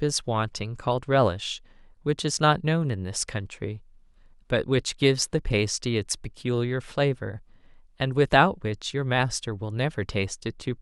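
Nothing in this recording stands out as a technical fault; it just runs along without any glitch worth pointing to.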